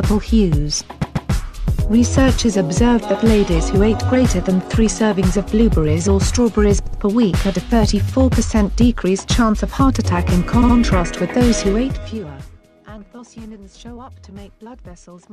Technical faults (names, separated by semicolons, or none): repeated frames